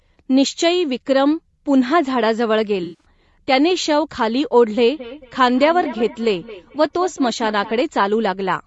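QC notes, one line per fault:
Throughout: low-delay AAC compression. The sound is rough and grainy, with noise filling the gaps between pitch harmonics. The short low-delay frames resolve harmonics poorly and spend bits inefficiently, which points to AAC-ELD at around 32 kbps as the likely cause. Nothing reaches above 8 kHz, consistent with the call's band limit.
2.83–3.05 s and 5.83–5.86 s: AAC frame loss with concealment. The first gap lasts 160 ms, consistent with eight lost 20 ms frames, and sounds like a smeared, noisy patch. The second lasts 20 ms, consistent with one lost frame, and is a brief phasey blip. In both, the decoder rebuilt the missing audio from the last good spectrum.
4.95–7.78 s: feedback echo between two devices. The sound returns roughly every fifth of a second, thinner and more ringing on each pass, peaking about 16 dB below the direct signal. A second device in the room replays the call, and its output re-enters the microphone. 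The local echo canceller cannot remove it because it only cancels its own device's playback.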